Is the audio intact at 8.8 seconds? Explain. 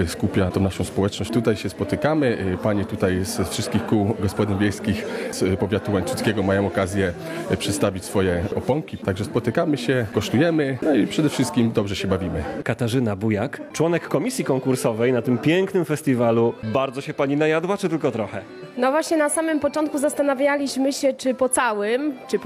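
Yes, at 8.8 seconds the audio plays through cleanly, with no dropout, click, distortion or other fault to be heard at that moment.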